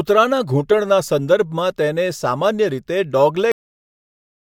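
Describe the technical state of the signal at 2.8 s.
At 2.8 s the speech signal is intact, with no audible fault at that point.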